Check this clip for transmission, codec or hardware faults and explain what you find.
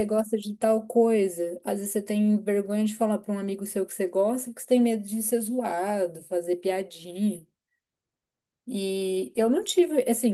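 No fault can be heard anywhere in the speech: the signal stays continuous and steady throughout, with nothing in level, timing or bandwidth that points to trouble along the path it travelled.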